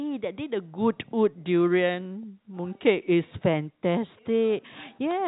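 No technical faults are audible.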